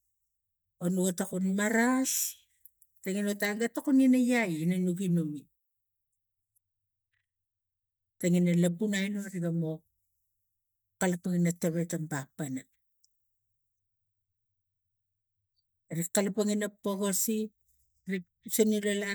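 No technical faults can be heard anywhere in the recording; the speech signal stays intact and steady throughout.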